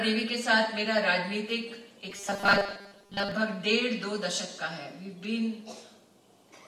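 Robotic sound from repeated short buffers runs from 2.10 to 3.32 s, where the audio collapses into a rigid, metallic buzz at 200 Hz. The likely cause is a starved buffer looping its last 5 ms, with most of the real audio in that stretch skipped.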